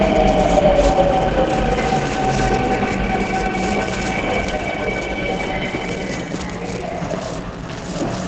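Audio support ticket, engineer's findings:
Whole clip muffled and hoarse, nothing above 8.6 kHz. Likely Opus compression in its SILK speech mode, squeezing everything into wideband. Heavy codec damage throughout; roughness fits a very low bitrate, around 12 kbps.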